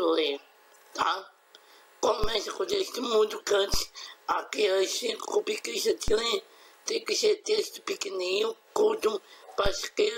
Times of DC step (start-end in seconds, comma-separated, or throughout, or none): 2.24, 3.74, 6.08, 9.66